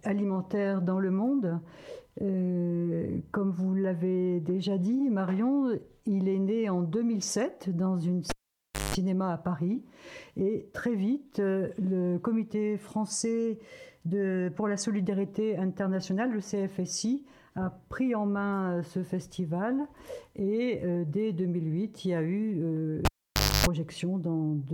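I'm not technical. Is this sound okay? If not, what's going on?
No, there's a cable pulled and plugged in twice, at 8.30 to 8.95 s and 23.05 to 23.66 s. Each time you get a pop, roughly half a second of near silence, a short burst of 50 Hz mains buzz as the plug goes back in, then another pop.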